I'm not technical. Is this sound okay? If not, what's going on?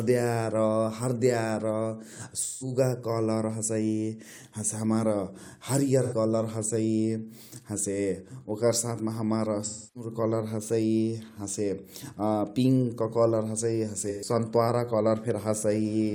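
No, there are four short dropouts in this speech, each an AAC frame loss with concealment. Bits of the compressed audio went missing, and the player guessed at the gap by stretching out the last good sound. That leaves brief smeared, fuzzy patches at 2.42 to 2.72 s, 6.02 to 6.14 s, 9.65 to 10.10 s (right after "मा हमार", the longest at about a third of a second), and 14.09 to 14.29 s.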